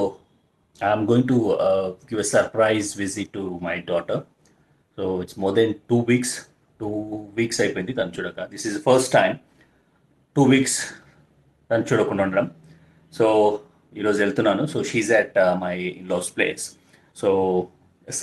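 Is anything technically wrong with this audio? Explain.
Yes, there's a timing problem running through the whole thing.

Clock drift between sender and receiver is present throughout. The sending end's clock runs around 4 percent fast, so the jitter buffer keeps overfilling and has to shed audio to keep up. You hear it as a faint, uneven unsteadiness rather than any single obvious glitch.

Repeated timing corrections run from about 0.05 s to 18.0 s. The receiver keeps trimming short slivers to match the sender's pace, which works out to roughly 104 percent speed. Because the cuts are small and irregularly spaced, they come across as slight hiccups and a subtly restless tempo. Underneath, the call codec's top end stops around 12 kHz, which fits Opus at a modest call bitrate.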